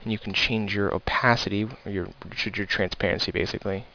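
Aliasing runs through the whole clip. The audio was brought down to a lower sample rate without a proper anti-alias filter first. The band stops hard at 5.5 kHz, which points to a rate of about 11 kHz, down from 44.1 kHz. Content that lay above 5.5 kHz folds back below it at wrong, unrelated pitches. These false tones sit only about 15 dB under the real sound. High detail turns gritty and metallic, and the spectrum stays dense right up to the edge.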